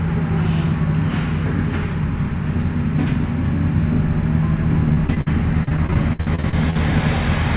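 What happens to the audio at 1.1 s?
Nothing goes wrong at 1.1 s: the audio carries straight through that moment with no dropout, glitch or distortion, only the steady narrowband character of the call path, whose G.711 coding leaves nothing above 4 kHz.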